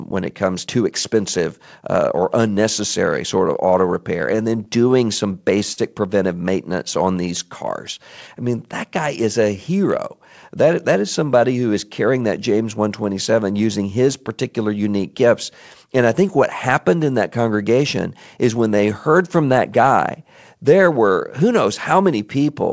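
A speech recording over a call link whose band stops at 8 kHz, which fits G.722 at 64 kbps. From 4.36 to 5.79 s there are repeated stalls (stutter): the jitter buffer ran dry ten times, and the held-over sound fills about 152 ms, the longest gap 57 ms. Nothing is lost, unlike packet loss, so the audio drags rather than skips. From 21.54 to 22.20 s a jitter buffer speed-up trims around 40 ms of pitch periods, playing at 105% speed. Pitch stays put, which separates it from a resampling error.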